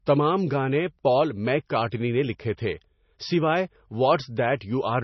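Speech runs through heavy MP3 compression for the whole clip, likely from encoding at a very low bitrate that fits roughly 24 kbps. With so few bits, the encoder cuts all treble above 5.9 kHz and drops weaker frequency lines that flicker in and out between frames. The result is dull, watery, swirling sound with smeared consonant attacks. A spectrogram would show a flat ceiling at 5.9 kHz and patchy, blinking holes below it.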